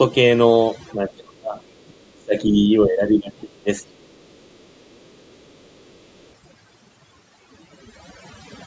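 Overdone noise removal runs through the whole recording. A noise reduction stage set far too aggressively keeps pulling individual frequency bands down or out whenever they sit close to its noise estimate, and it takes the softer parts of the speech with them. The background collapses into near silence dotted with small twinkling artefacts. Beneath that, the band tops out at 8 kHz, as expected from the call's microphone processing.

From 0.94 to 1.6 s, and again from 1.88 to 4.13 s, the talker's speech drops sharply, by roughly 25 dB at its deepest. Across the first span most of the sound is affected, and across the second about two seconds of it. The most likely cause is speech suppressed in double talk. With both ends talking at once, the echo canceller could not tell the local talker apart from the loudspeaker echo, so it attenuated everything.

Between 4.41 and 4.79 s comes background gating by the echo canceller. 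While the loudspeaker was playing, the canceller clamped the microphone down, and the room sound dips by about 7 dB for a brief moment, roughly a fifth of a second in total, before recovering when the canceller releases.

At 5.34 to 5.39 s and again from 5.56 to 6.29 s a second, very faint voice comes through, around 40 dB below the main speech. It is first a short scrap and then a longer stretch. This is likely the other side's voice leaking through: the far end plays over the talker's loudspeaker, and the echo canceller left a residue of it in the microphone signal.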